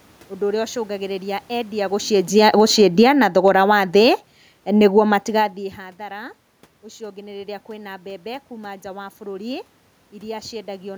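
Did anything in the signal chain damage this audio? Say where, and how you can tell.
Yes. The automatic gain falling fault comes from the call-processing stage. From 2.23 to 3.71 s the level sinks by about 12 dB, and the room noise sinks with the speech, which a talker moving around 2 s could not cause. On a waveform the envelope tapers steadily across that span, and on a spectrogram the whole frame dims evenly, including the noise floor between syllables. The gain control judged the input too loud and pulled its gain down gradually.

The automatic gain rising fault, also from call processing, overlaps the fall. Between 3.12 and 4.4 s the gain climbs back by about 4 dB, so speech and background swell together over roughly a second. This is a correction that only partly undoes the earlier cut, separate from the talker moving near 5 s. On a waveform the envelope and the gaps between phrases both grow. 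On a spectrogram the noise floor brightens along with the voiced bands, which is the mark of gain applied to the entire signal.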